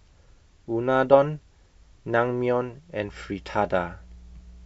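From 3.03 s to the end, mains hum appears: a steady 60 Hz tone, roughly 25 dB below the speech, from power-line coupling, showing as a horizontal spectrogram line.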